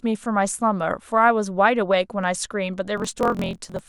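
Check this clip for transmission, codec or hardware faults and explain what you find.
One fault is present: a block size mismatch (truncated) from 2.95 s to the end of the clip. One stage hands over longer blocks than the next stage reads, so the tail of each block is discarded. The reads fit a 1024-sample size. The chopping makes a 43.1 Hz buzz, and the speech runs 1.12 times fast at roughly normal pitch. A spectrogram shows vertical striations about 23 ms apart, and the waveform shows abrupt splice jumps at the same spacing.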